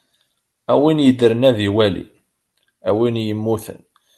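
The speech has passed through a WebRTC call path whose top end stops near 12 kHz, which fits an Opus stream at about 40 kbps, and nothing in the signal departs from how such a call ordinarily sounds.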